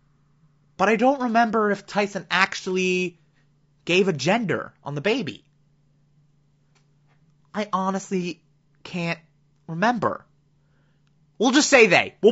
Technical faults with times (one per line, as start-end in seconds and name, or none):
0.00-12.32 low-delay AAC compression
11.74-11.96 hard clipping